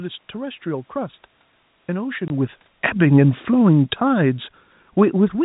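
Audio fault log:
2.04 to 5.39 s, automatic gain falling: The level drops by about 5 dB over these three seconds. The fall is slow and steady, not a sudden step. The room noise sinks along with the speech, which shows the gain itself is moving. The gain control judged the input too loud, or its background noise too strong, and turned itself down gradually. A change in the talker's distance at roughly 2 s also shifts the voice level, but that change does not pull the background down.
2.28 to 2.30 s, packet loss filled with silence: The speech cuts out for 20 ms. The sound stops dead and then returns. Both edges are hard. One gap of this length fits a single lost packet of 20 ms. The receiver played silence in its place instead of concealing the loss.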